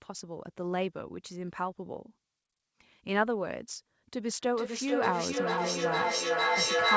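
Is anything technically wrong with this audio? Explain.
Yes. From 4.38 s to the end there is feedback echo between two devices. A second device on the call replays this microphone's sound into the room, and neither echo canceller removes the other's playback. Words return roughly every half second, thinner and ringing, reaching about 5 dB above the speech, so the repeats pile up.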